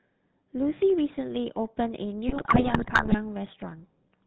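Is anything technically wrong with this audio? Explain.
Yes. The speech carries GSM full-rate codec damage throughout. The codec models the vocal tract and drives it with a sparse pulse excitation, which fits the 13 kbps full-rate coding. Nothing above 4 kHz survives, so the voice sounds buzzy, gravelly and band-limited.

From 2.28 to 3.16 s there are GSM bit errors. Corrupted bits reach the decoder and scramble filter, pitch and gain values for many frames. The spectrum bends and the level jumps. The speech breaks into squawks, pops and gargling.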